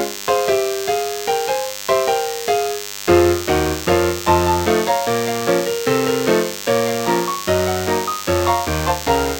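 From start to finish a DECT cordless phone buzz sits under the sound: a thin, steady 100 Hz drone, fairly loud against the signal, from radio bursts every 10 ms rectified in the audio circuit. A spectrogram shows evenly stacked harmonic lines at 100 Hz spacing; the waveform shows regular 10 ms spikes.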